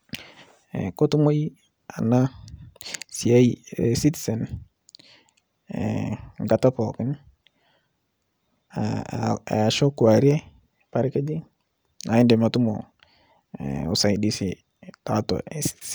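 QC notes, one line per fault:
No fault found in the clip.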